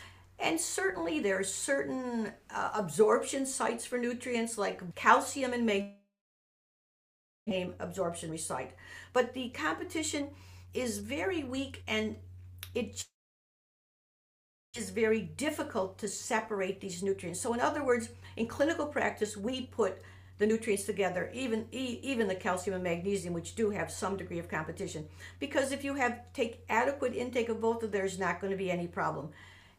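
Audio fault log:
5.81 to 7.53 s and 13.01 to 14.78 s, long network dropout: the sound fades into a brief buzz, then about 1.4 s and 1.6 s of near-silence. Audio resumes with roughly a second missing each time, likely from packets that never arrived.
7.57 to 8.34 s, 9.09 to 12.82 s and 14.93 to 26.30 s, jitter buffer speed-up: after each gap the sound runs hurried at unchanged pitch, 114%, 113% and then 107% speed. The receiver trims short pitch-period slices, about a tenth, half and seven-tenths of a second in total, to shed added delay.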